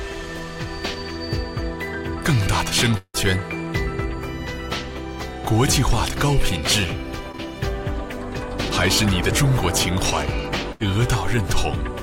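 Three separate breaks in continuity can be heard in this audio, all consistent with a packet-based transmission path. From 2.97 to 3.16 s the sound stops progressing. The last moment is stretched into a fading buzz and hiss for most of that span, then about 60 ms of near-silence follows before the audio returns, with roughly 0.16 s of material gone. This is likely a long network dropout, where nothing arrived for that interval and the receiver improvised until it gave up. At 7.32 to 7.35 s there is a much briefer smear lasting a few hundredths of a second, typical of short concealed packet loss. About 20 ms of audio never reached the decoder, and the receiver extrapolated the preceding sound before blending back into the real signal, so the glitch registers as a wobble rather than a gap. From 10.72 to 10.82 s a burst of packet loss produces a held, decaying continuation of the last sound lasting close to 80 ms, after which the audio picks up further along with about 80 ms missing. 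The receiver's concealment extended the final received fragment and faded it as the gap lengthened, which is why the joint sounds like a short frozen tail rather than a clean cut.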